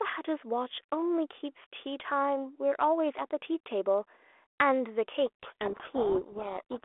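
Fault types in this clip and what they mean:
Codec payload misread: from 5.26 s to the end at 6.84 s, the speech is suddenly buried under harsh, grinding distortion that drowns its shape, after light, band-limited telephone sound from the 32 kbit/s G.726 link. The cause is a disagreement over the bit order of the G.726 code words: the decoder accepts each frame as valid but reads the ADPCM difference values with their bits reversed, so its predictions go wildly wrong.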